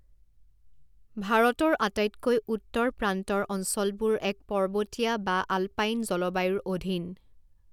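No faults detected in this speech recording.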